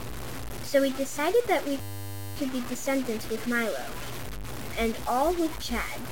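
A speech recording, grainy and harsh from start to finish, most likely from low bit depth without dither: truncation to about 5 bits leaves error noise only around 10 dB under the speech, gritty on quiet passages. On a waveform the samples sit on coarse visible steps, and the spectrogram shows a dense, signal-following noise haze. From 1.81 to 2.36 s a system hang loop repeats one 10 ms slice 55 times, heard as a steady 100 Hz buzz. The waveform shows an identical short cycle tiling that span, and the spectrogram shows flat harmonic lines spaced at 100 Hz.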